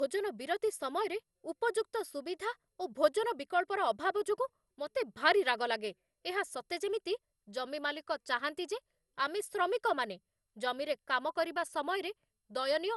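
From start to finish the speech sounds swirly, hollow and smeared, with consonant attacks blurred and nothing above about 11.9 kHz. The likely cause is generation loss: repeated decoding and re-encoding through an MP2-style codec at a rate that points to about 96 kbit/s, roughly five passes. Unlike a single low-bitrate encode, the damage exceeds what that rate alone would give, because each pass requantises on a shifted frame grid and the noise accumulates.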